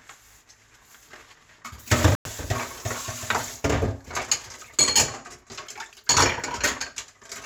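At 2.15 to 2.26 s the sound drops to silence for about 100 ms, a flat waveform gap and blank spectrogram column, likely a Bluetooth stall from delayed wireless packets.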